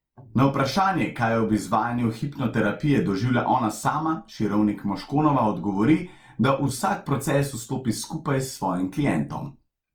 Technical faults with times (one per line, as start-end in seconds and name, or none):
0.00-9.94 Opus compression